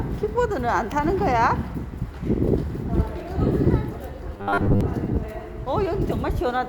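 From 4.34 to 4.81 s the audio takes on robotic sound from repeated short buffers. For most of that half-second the material turns into a rigid, metallic buzz pitched at 100 Hz, with the original sound only loosely showing through. The likely cause is an input stream starving: fresh audio arrived too slowly, so the playback side kept looping the last 10 ms block while real audio was dropped, and that fixed loop length sets the buzz frequency.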